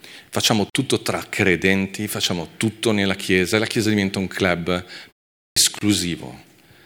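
A speech clip with two kinds of fault. A gap at a join of encoded pieces opens at 0.70 s for 48 ms and again at 5.79 s for 26 ms: short silences with smeared edges, after which the speech resumes where it stopped, consistent with separately encoded segments joined without trimming encoder delay and final-frame padding. At 5.50 s there is a clipped start after a pause. Following a 0.46 s pause, the first 64 ms of speech is missing and the word begins abruptly, as the output device wakes or relocks too slowly after silence.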